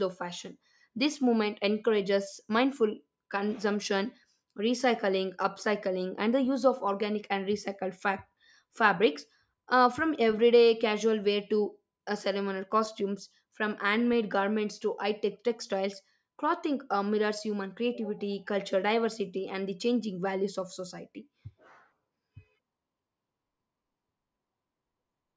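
A recording of speech, with nothing technically wrong to be heard anywhere in it. No fault turns up at any point, so there are no times or causes to report.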